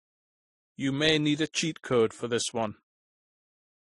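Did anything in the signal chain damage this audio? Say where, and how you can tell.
Yes. Throughout, the speech carries the artefacts of more than one codec heard together, with nothing above 11.4 kHz, which points to transcoding between lossy codecs, likely low-bitrate MP3 re-encoded as AAC-LC.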